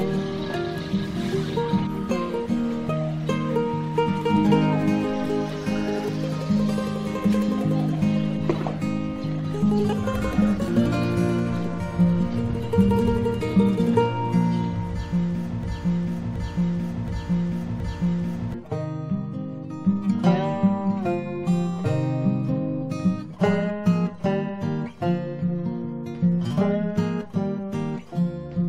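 At 15.63 s the audio snags into a broken-record loop: a fragment about 0.72 s long plays, then plays again, exactly the same, back to back, four times over, until 18.54 s. The cause is likely a stall somewhere in the player, encoder or stream, with the last held chunk resent while nothing new arrived. Whatever should have played across those three seconds is simply gone; when the loop breaks, the sound picks up further along.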